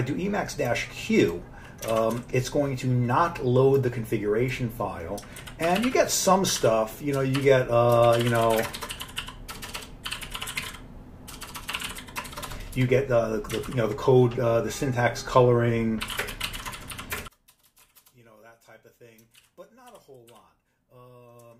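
From 17.28 s to the end, the sound collapses by about 28 dB into a faint residue, likely one channel inverted: summed to mono, the shared centre and low end cancel. Unlike a dropout, it never falls fully silent; a faint difference signal lingers.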